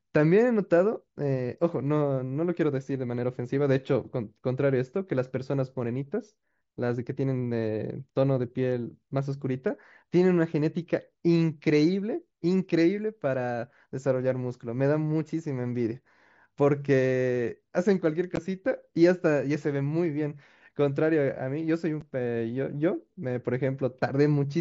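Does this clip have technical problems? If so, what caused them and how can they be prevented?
Yes, unconcealed Bluetooth headset packet loss leaves two brief, hard-edged holes in the speech, at 18.36 s lasting 15 ms and at 22.01 s lasting 7.5 ms. The durations fit two and one lost 7.5 ms mSBC frames between headset and phone, replaced by silence or an idle pattern rather than smoothed over. Unlike concealed loss, nothing fills the gaps, so each one cuts off abruptly instead of blurring. Keeping the headset close to the phone, away from Wi-Fi congestion and body shielding, prevents it.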